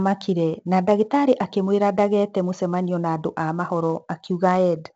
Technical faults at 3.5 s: 4-bit ADPCM compression

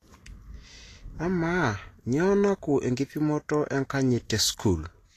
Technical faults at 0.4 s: Vorbis compression

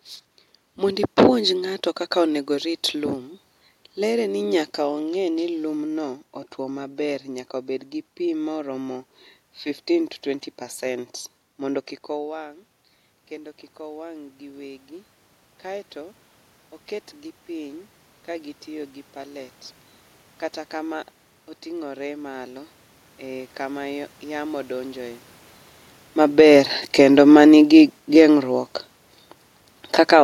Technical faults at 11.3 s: automatic gain rising

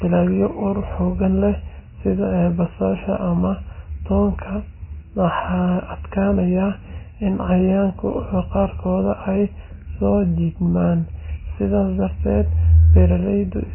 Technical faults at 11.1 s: MP3 compression

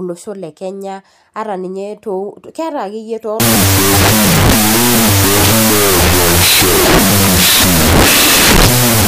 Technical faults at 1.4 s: none

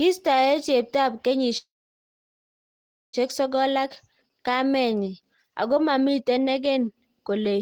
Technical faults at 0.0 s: none

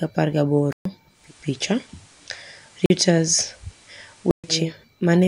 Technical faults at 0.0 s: none

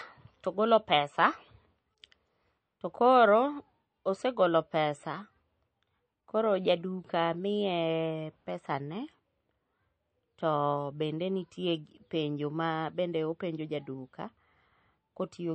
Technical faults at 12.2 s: MP3 compression

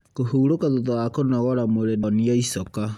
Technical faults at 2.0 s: stream segment skipped

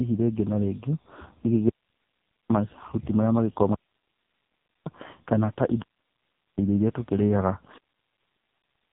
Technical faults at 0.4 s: AMR narrowband mobile codec

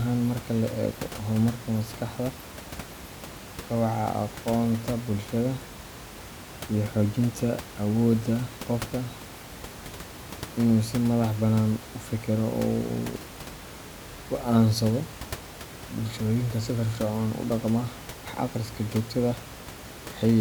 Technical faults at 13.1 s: none

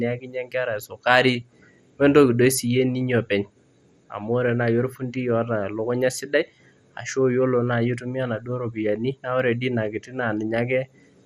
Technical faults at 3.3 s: MP2 compression

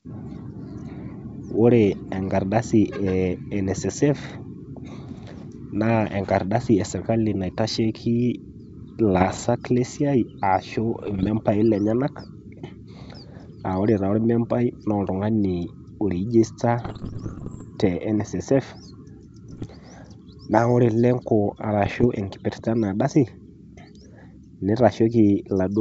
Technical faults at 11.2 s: bit errors on an ADPCM link

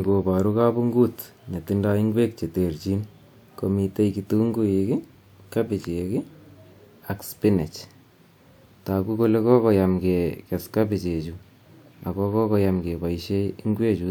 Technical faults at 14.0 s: none

